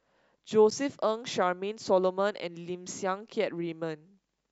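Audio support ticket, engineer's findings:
Dropout at 0.70 s. Speech cuts to silence for about 9 ms, then resumes. Very short gap. Likely cause: Bluetooth stall in the wireless link to the headphones. Interference delays packets, the receiver's buffer empties, and playback halts until retransmitted audio arrives. Here the wait was brief, so the gap stays under 10 ms. Check the radio environment and link quality.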